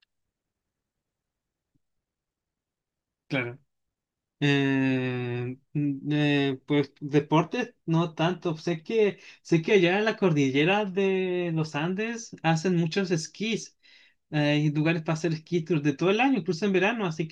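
No technical faults can be heard anywhere in the speech, so there is nothing to describe in time order.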